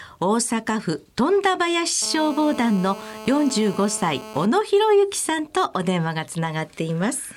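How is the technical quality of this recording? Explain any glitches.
The recording has one clear glitch: GSM phone buzz from 2.02 to 4.46 s. It's a hard, raspy buzz at about 217 Hz, packed with harmonics, sitting roughly 15 dB below the wanted sound and holding nearly steady, which fits a 2G phone on a call nearby. The handset transmits in pulses 217 times a second, and the audio circuitry rectifies those radio bursts into an audible tone unrelated to the material itself.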